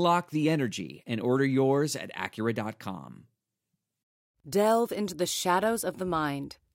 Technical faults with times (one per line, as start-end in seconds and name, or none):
none